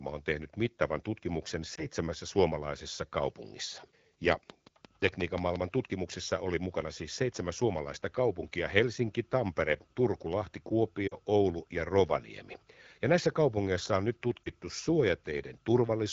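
Speech coded in AMR wideband, with light codec damage, carries two kinds of fault. Lost AMR speech frames cause brief warbling dips near 1.76 s, 11.08 s and 14.44 s. Each lasts about 20 ms, which fits a single frame, except the 11.08 s dip, which runs about 40 ms. The decoder stretches the last good sound with falling gain rather than cutting it, which distinguishes these dips from clean dropouts. A train of clicks runs from 4.32 s to 5.57 s: roughly seven similar pulses at a regular 5.7 per second, standing about 15 dB above the speech. Unlike frame loss, these pulses add sharp energy instead of smearing it, most likely from electrical interference or a struggling interface.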